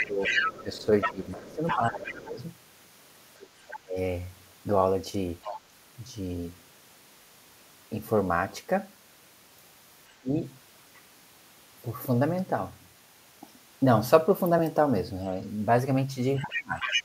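From 0.0 to 3.77 s the other side's voice leaks through, almost as loud as the talker (about 5 dB below). Over 0.02 to 3.97 s, about two seconds of the talker's own speech is pushed down by up to about 20 dB. This is speech suppressed in double talk: the talker dips and dulls while the second voice is present, likely because the echo canceller turned down everything when both sides spoke at once. It is a loss, not an added voice. Brief leaks recur at 5.42 to 5.58 s (about 10 dB down) and at 10.08 to 10.12 s, which is very faint. The talker then drops by about 25 dB at 10.21 to 10.33 s. From 16.36 to 17.03 s the leak returns near full level, and the talker is suppressed again, by about 25 dB, at 16.44 to 16.92 s. Leakage differs from suppression because it adds a distinct second voice that is often thin or chopped. This is likely residual loudspeaker echo that the canceller failed to remove.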